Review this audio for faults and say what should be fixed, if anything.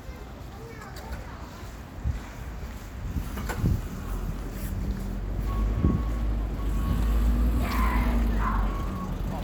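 Nothing here needs fixing, as no technical faults turn up anywhere in this recording of sounds.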